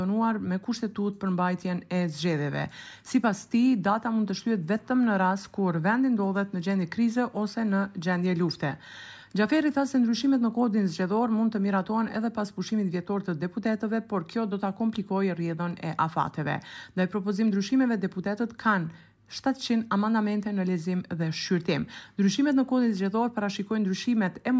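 No technical faults can be heard anywhere here.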